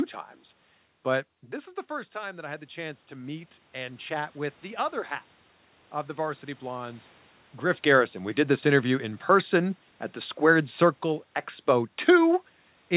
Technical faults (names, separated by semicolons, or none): automatic gain rising; automatic gain falling